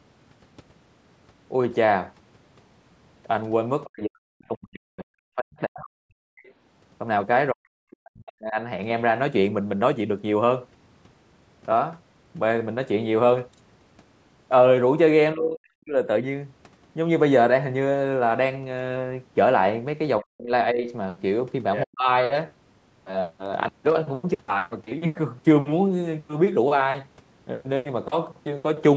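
Right at 3.86 to 3.90 s there's a brief scrap of the other side's voice leaking through, faint, well down under the talker, roughly 25 dB below. It's most likely the far end playing out of the loudspeaker and the echo canceller not quite scrubbing it from the mic. It comes back at 21.74 to 21.84 s, and that one's much more obvious, only about 10 dB under the speech, a short fragment that sits on top of the talker.

Straight after each leak, and a few more times, you hear speech suppressed in double talk: 3.90 to 6.49 s, 7.52 to 8.57 s, 15.34 to 15.96 s, 20.21 to 20.86 s and 21.84 to 22.08 s. The talker's level sags hard, down by something like 40 dB at the worst points, so the voice ducks and drops out in chunks. The first stretch loses about two seconds of the talker in total. The likely cause is both sides talking at once, with the canceller unable to tell near speech from echo and clamping down on everything.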